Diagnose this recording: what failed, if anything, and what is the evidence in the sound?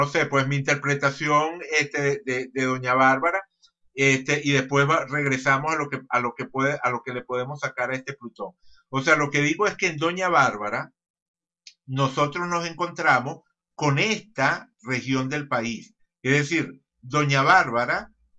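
Nothing failed: the recording gives no evidence in the sound of any fault at any stage.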